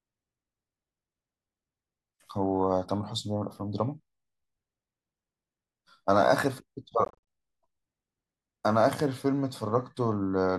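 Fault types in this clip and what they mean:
Bluetooth dropout: audio packets likely arrived too late at the headphones and were discarded, so the speech drops to silence in short gaps from 7.05 to 7.18 s, about 154 ms lost, longest gap 42 ms, then resumes as though it had played on.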